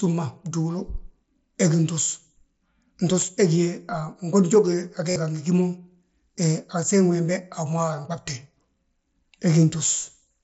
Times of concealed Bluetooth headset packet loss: 5.11-5.16

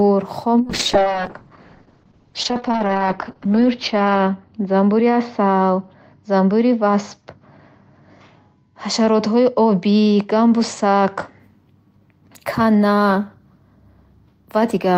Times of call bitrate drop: 0.63-11.45

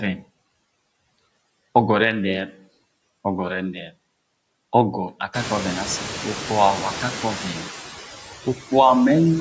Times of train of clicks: none

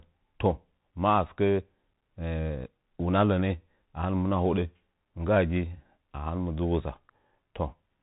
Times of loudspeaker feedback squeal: none

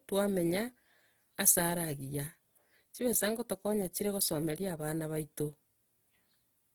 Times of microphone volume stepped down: none

